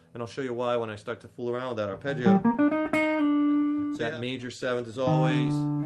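The sender's audio clock runs around 3 percent slower than the receiver's throughout, a clock drift between sender and receiver. The jitter buffer keeps draining, so the receiver has to pad the stream, and the sound has a faintly unsteady, dragging pace rather than one clean error.

From 0.28 s to 5.46 s the receiver makes repeated timing corrections, stretching playback to about 98 percent speed and adding around a tenth of a second overall. Each insertion is tiny and unevenly spaced, heard as slight hiccups and a tempo that sags.

At 1.57 s to 1.60 s a packet arrives late and the buffer briefly runs dry, a short stall from a late packet. The receiver holds the preceding sound for 16 ms before resuming where it left off. Nothing is lost, but a moment sounds held with a faint buzz.

Between 2.23 s and 3.50 s come scattered short gaps, roughly five late or missing packets, each patched by extending the last sound. 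The longest is only about 10 ms and they add up to a few tens of milliseconds, leaving small ticks and smears in audio that passes through an Opus call path band-limited near 12 kHz.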